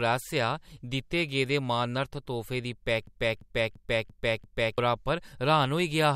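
System hang loop from 3.07 to 4.78 s, just after "गेदे मानार्थ तोह्फे दी": a frozen system replays one 341 ms buffer five times, a 2.9 Hz stutter costing about 1.5 s of speech.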